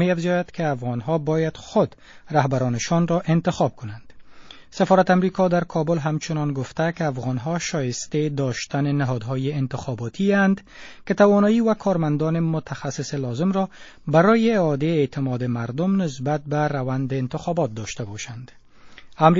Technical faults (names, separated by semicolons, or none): MP3 compression; pre-echo